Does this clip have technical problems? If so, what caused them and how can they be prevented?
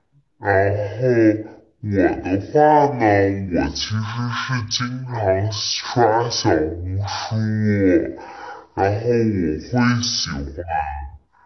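Yes. Throughout the clip the speech runs at half speed and sounds a full octave low, the signature of a wrong sample rate: audio recorded at 48 kHz is being played back at 24 kHz with no conversion, so timing and pitch drop together by a factor of two. Prevention: resample to the playback device's rate, or tag the file's rate correctly so the player converts it.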